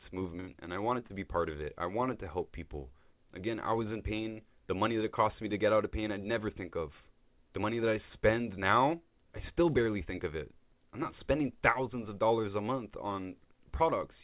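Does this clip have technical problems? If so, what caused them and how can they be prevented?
Yes. From 0.40 to 0.50 s, just before "and I", the last sound is held on as a buzz or fading hiss for about 75 ms, then the audio resumes with about 80 ms of speech missing. This is a burst of packet loss: packets arrived too late or not at all, and the receiver concealed the gap by extending the previous sound at decreasing level. Enabling forward error correction or redundant packets and giving the connection steadier bandwidth would prevent it.

Three short smears or wobbles follow, at 0.52 to 0.56 s, at 1.00 to 1.03 s just after "and I", and at 1.07 to 1.12 s just before "be part of it". Each is short concealed packet loss. About 20 ms of audio missed the decoder each time, and the receiver filled 23, 16 and 22 ms respectively by continuing the last sound before blending back in. The call path itself uses G.711 mu-law, which fits a 64 kbps stream, with nothing above 4 kHz. 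A larger or adaptive jitter buffer, plus packet-loss protection, would prevent these gaps.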